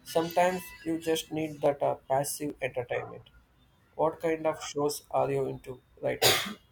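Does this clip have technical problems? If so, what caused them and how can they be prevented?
Yes. There's a regular tick running through the speech, about seven clicks from 0.82 s to 5.87 s, spaced a steady 0.84 s apart. That even spacing points to clock drift buffer slips. The likely cause is two devices running on their own clocks, one fast by something near a thousand parts per million, so the buffer between them keeps creeping until a chunk of samples, roughly thirty at a time, gets dropped or repeated. To prevent it, lock both devices to one shared word clock, or put an adaptive resampler between them.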